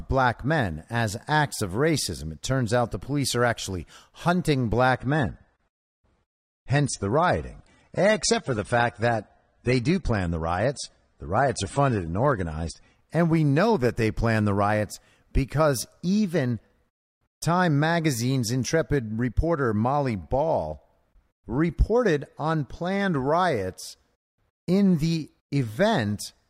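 Speech clip where, after "police are actually hunting", the adaptive stream drops to a lower bitrate from 4.95 to 12.95 s, with treble gone above 9.7 kHz, sounding like roughly 32 kbit/s AAC, until "and we know that".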